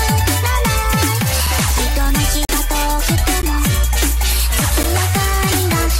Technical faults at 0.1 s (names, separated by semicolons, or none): none